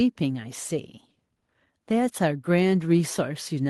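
Speech recording, with no technical faults heard anywhere in it.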